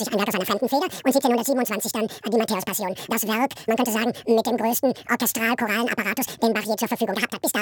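From start to finish the audio is read two samples at a time (double speed): the reader treats each pair of samples as one frame, so everything plays twice as fast and a full octave, 12 semitones, higher.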